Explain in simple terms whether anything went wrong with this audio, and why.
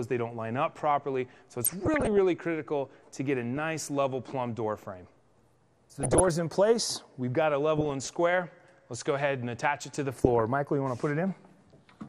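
Throughout the clip the audio sounds dull and plainly degraded, with a gurgling, grainy quality, as if the top end keeps switching off and the rest is roughly chopped into steps. This is MP2 compression damage, likely from squeezing the sound into too little data. The format divides the sound into 32 frequency strips and shares out a limited budget of bits, so higher strips get dropped and the remaining ones lose fine detail.

On top of that come short bursts of watery, bubbling blips and chirps, at 1.64 to 2.18 s, 3.41 to 3.57 s, 6.00 to 6.35 s, 7.77 to 8.07 s and 10.16 to 10.41 s. This is DAB burbling. When a digital radio signal is weak, some corrupted data slips past the error correction. Wrong values then cause brief noise blips or sudden level jumps in individual frequency strips.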